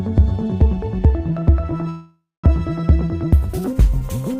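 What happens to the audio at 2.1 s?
At 2.1 s a call audio freeze is under way, from 1.89 to 2.46 s. The receiver stretches the last sound into a fading buzz or hiss, then about 220 ms of silence. The cause is likely delayed packets draining the jitter buffer. The audio then resumes where it stopped, 542 ms late, with nothing lost.

This moment also falls inside a section at the wrong speed, from 0.00 to 3.68 s. The sound runs 1.41 times too fast. Its pitch is raised by roughly seven semitones, so everything sounds higher and hurried. The likely cause is playback against the wrong clock.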